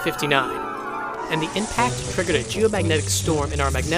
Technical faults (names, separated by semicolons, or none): loose connector crackle